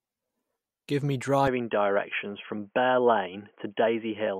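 From 1.48 s to the end, the speech turns dull and boxy with nothing above 3.3 kHz, arriving without a gap or level jump and carrying a faint new noise floor far beneath it. This is likely an input switched to a poorer device.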